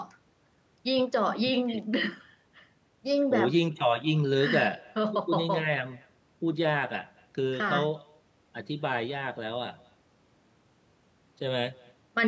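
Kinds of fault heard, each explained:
Echo with no canceller: the far end's loudspeaker output reaches its microphone and comes back with nothing removing it, so the speech throughout is trailed, around a fifth of a second later, by a faint copy about 28 dB down that sounds thinner.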